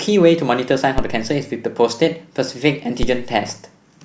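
A speech recording with two DC steps, at 0.98 s and 3.03 s, each heard as a low thump. The waveform's zero line jumps by about -7 dBFS and drifts back as a 2 Hz high-pass bleeds it away, while the spectrogram shows a brief broadband vertical smear at each step.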